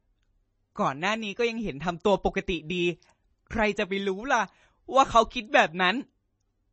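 Throughout the speech the sound is watery and swirly, with chirpy, metallic s sounds and blurred consonant onsets, most likely MP3 compression at a low bitrate near 32 kbps. A spectrogram shows a hard ceiling at 8.3 kHz and weak detail flickering between frames.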